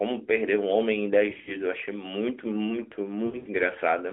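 From 1.30 to 1.56 s and 3.26 to 3.49 s, lost AMR speech frames make the speech warble and dip. The decoder repeats old settings with falling gain.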